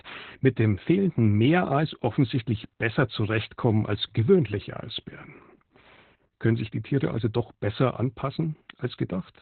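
Opus voice compression runs throughout this speech clip: at about 8 kbps in SILK narrowband mode, coarse excitation coding and nothing above 4.3 kHz leave it muffled, hoarse and slightly robotic.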